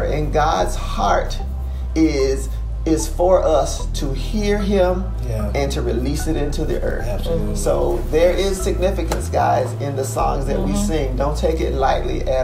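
No technical faults can be heard anywhere in this audio. Nothing in the way the sound was captured or carried stands out as having gone wrong.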